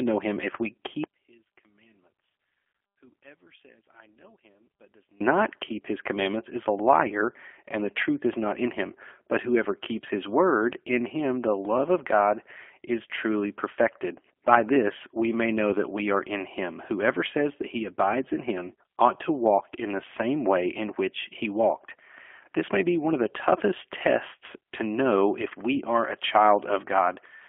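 Throughout, the G.729 codec narrows everything to about 300 Hz–3.4 kHz and leaves a rough, synthetic buzz, which fits an 8 kbit/s speech coder rather than simple band-limiting. From 1.04 s, after "know him if we", to 5.21 s, before "keep his commandments is", the voice drops by about 30 dB to a faint residue, most likely one channel inverted and cancelling in mono, unlike a dropout, which leaves true silence.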